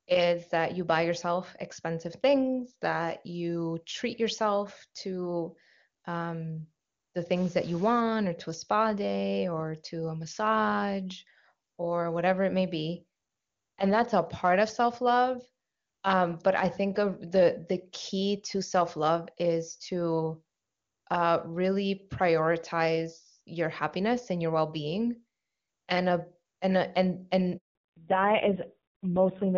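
From 7.36 to 8.01 s the voice turns distorted, with a gritty edge riding on every syllable and a hiss filling the small pauses. This points to a stuck bit, likely a data line or converter bit held at one value, so about half the samples are pushed off by that bit's weight. On a spectrogram the stretch shows a broadband smear of energy up the whole frequency axis. The waveform looks jagged, with pauses that never settle to zero.

At 27.57 s a handover gap cuts the voice. It fades out within a few tens of milliseconds and stays silent for 180 ms, until 27.75 s, while the call switched networks and no speech frames arrived. Whatever was said in that window is gone. The waveform shows a brief taper into a flat line, and the spectrogram shows a clean vertical blank band across all frequencies.

From 27.75 s to the end there is a fallback to narrowband. Before this point the call runs as HD Voice, clear and full up to about 7 kHz. 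After the gap, everything above 4 kHz disappears, and the voice becomes dull, muffled and rasping. That fits a drop to a low-rate narrowband codec around 5.9 kbit/s. On the spectrogram the upper region goes abruptly dark along a hard horizontal ceiling at 4 kHz.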